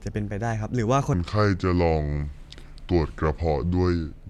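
From 1.13 s to the end, a wrong sample rate slows the speech to about 0.73 speed. Pitch drops about 5.5 semitones, which fits 44.1 kHz audio played at 32 kHz.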